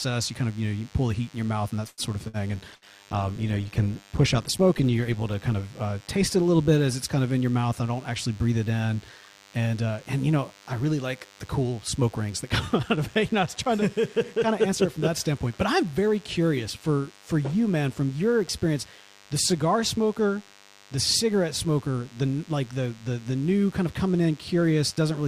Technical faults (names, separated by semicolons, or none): DECT cordless phone buzz; call audio freeze; burst of packet loss; call bitrate drop; jitter buffer speed-up